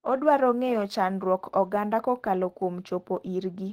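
No technical faults are audible.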